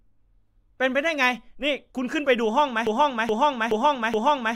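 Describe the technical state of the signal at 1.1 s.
The speech at 1.1 s comes through intact, with no fault audible at that moment.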